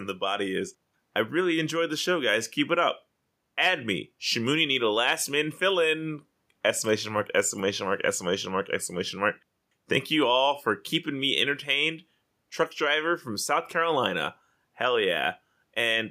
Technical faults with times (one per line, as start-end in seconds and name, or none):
none